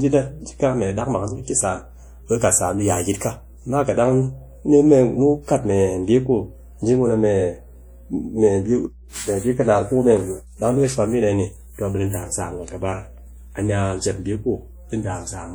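From start to finish, mains hum sits under the speech: a steady 60 Hz tone, about 20 dB below the speech, from power-line coupling such as a ground loop or nearby transformer. On a spectrogram it is an unbroken horizontal line at 60 Hz, present even in pauses.

Also throughout, plainly audible compression damage gives the speech a ringing, washy quality and a hiss that swells and fades with the speech. It points to likely WMA compression at around 48 kbps, where quantisation noise spreads across long transform blocks. A spectrogram shows smeared energy around onsets and patchy, gapped detail, with content reaching about 20.1 kHz.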